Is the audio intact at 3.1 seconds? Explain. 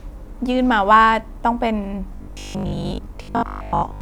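No. At 3.1 seconds the speech is inside a stretch of robotic sound from repeated short buffers, running from 2.17 s to 4.01 s. Most of that span is likely recycled audio: the last 20 ms block gets replayed while fresh audio is skipped. That repetition imposes a fixed 50 Hz pitch, so the speech becomes a rigid, metallic buzz that only loosely follows its contour. A waveform shows identical 20 ms chunks repeating, and a spectrogram shows evenly spaced horizontal harmonics 50 Hz apart.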